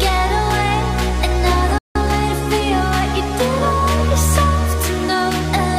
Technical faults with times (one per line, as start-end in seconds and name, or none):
1.78-1.96 playback stall
1.96-3.08 time-compressed catch-up